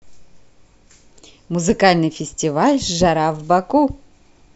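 No technical faults are audible.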